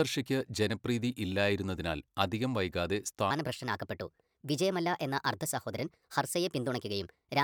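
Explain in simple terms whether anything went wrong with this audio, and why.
From 3.3 s, right after "ജനപ്രീതി ഇല്ലായിരുന്നതിനാൽ അധികം വൈകാതെ", the speech suddenly sounds hurried and higher, roughly five semitones up, until the end. This is a section at the wrong speed, playing about 1.31 times too fast, likely because that part was fitted to the wrong clock.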